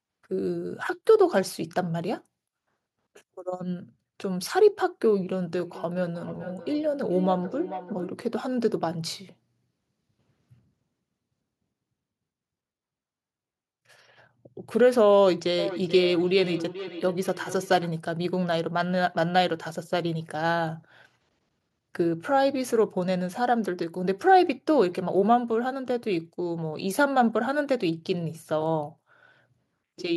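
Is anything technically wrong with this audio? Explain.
Yes. From 5.59 to 8.19 s, and again from 15.58 to 17.92 s, there is feedback echo between two devices. Two devices in the same room are joined to one call, and one of them plays out what the other's microphone sent. That microphone picks the sound up again, and the echo canceller can't remove it, since it only handles what its own device plays. The speech therefore comes back at a steady interval of about 400 ms, thinner and more ringing on each pass. The first stretch peaks at about 13 dB below the speech and the second is louder, at about 10 dB below.

At 28.66 s there is a bit error spike. A single flipped bit in memory or on a digital link corrupted two consecutive samples, making their values jump by a power of two before snapping back. It is heard as one sharp tick spread across the whole spectrum, with no relation to the speech around it.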